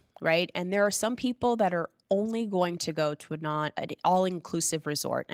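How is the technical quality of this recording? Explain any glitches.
No glitches can be heard anywhere in the recording. The speech has gone through Opus voice compression in its hybrid mode at 24 kbps, which keeps the full band up to about 20.2 kHz and leaves only light coding damage.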